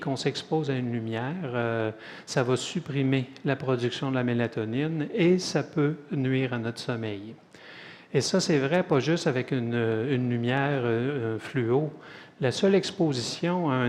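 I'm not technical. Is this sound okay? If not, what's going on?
No. Hard clipping at 2.38 to 2.40, 8.74 to 8.95 and 10.54 to 10.59 seconds: the loudest moments were slightly too big for the recording to hold, so their tops were sliced flat, adding brief crackly harshness.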